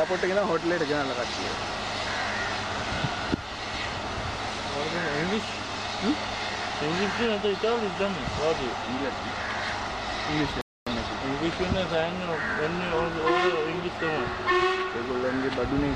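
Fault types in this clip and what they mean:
Rebuffering stall: the player ran dry on downloaded audio and just waited for more to arrive. At about 10.61 s the sound drops to silence for roughly a quarter second, then picks up right where it left off, so nothing's missing, the clip just gets longer.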